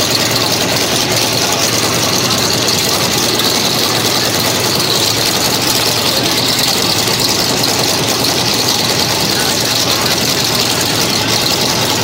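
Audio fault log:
throughout, sample clock jitter: an unsteady converter clock shifts the sample timing by about 0.7 microseconds rms, so the error tracks the waveform's slope. The result is a roughness about 35 dB down that swells on loud, bright passages and disappears in silence, unlike steady broadband noise.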